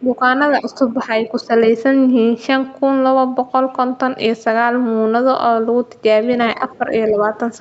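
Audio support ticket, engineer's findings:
Speech suppressed in double talk. Level dips of around 10 dB at 0.01–0.22 s, 0.61–1.52 s and 6.56–7.29 s, with the middle and last stretches only partly ducked. Likely component is the echo canceller, which cannot separate near talker from loudspeaker echo while both sides are active and so attenuates the whole microphone signal. The top of the band is already capped near 8 kHz by the call path, consistent with an Opus wideband link.

Other side's voice leaking through. A brief far-end fragment at 6.74–6.78 s and a longer one at 7.08–7.38 s, both faint, roughly 30–35 dB under the talker. Both overlap the late suppression window, when both sides are talking. Likely residual echo: the canceller does not fully remove the far end's voice picked up by the microphone from the loudspeaker.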